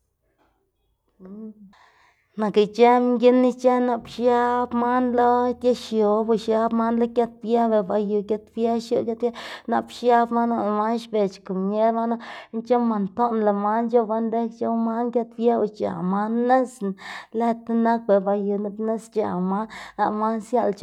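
From 11.05 s to 15.82 s the speech turns dull and muffled, clearing just before "man nisna lëd tinak". This is de-emphasis applied wrongly: a treble-cutting curve meant to reverse pre-emphasis was applied to sound that did not need it. The response falls gradually with frequency, reaching about 11 dB down at 10 kHz relative to 1 kHz. Unlike a low-pass filter or codec bandwidth limit, there is no abrupt cutoff, only a smooth, progressive loss of brightness.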